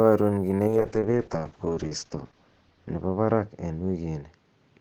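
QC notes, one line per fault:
0.68 s to the end: call bitrate drop. The encoder's rate falls from 32 kbps to 7 kbps and sits at that floor for 1.5 s, so with far fewer bits per frame the speech turns rough and watery. The codec also narrows its bandwidth from 20 kHz to 8 kHz, dulling sibilants and air. On a spectrogram, energy above 8 kHz cuts off once the bandwidth narrows, and the harmonics below look smeared and blotchy.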